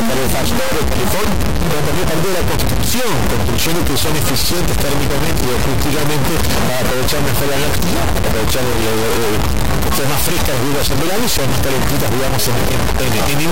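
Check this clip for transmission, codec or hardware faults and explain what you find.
One hardware fault runs through the whole clip: a stuck bit. A high-order data bit likely frozen at one value shifts about half the samples by a large fixed step, giving harsh buzz, and unlike clipping, even pauses fill with loud noise.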